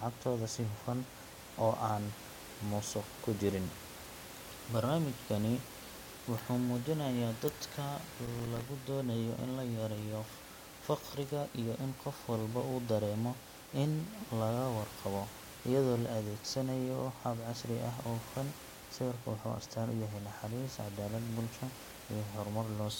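From 8.26 to 8.61 s the speech is torn by a burst of processor overload crackle. The processor repeatedly failed to deliver its small audio buffers on time, each miss leaving a hard-edged gap of silence a few milliseconds long, which fits buffers of roughly 3 ms. Around fifteen such gaps in about a third of a second sound like gritty tearing riding on the speech. A single dropout would be one clean hole; this is a rapid cluster that stops when the load passes. The room noise, about 15 dB below the speech, drops out in the same gaps.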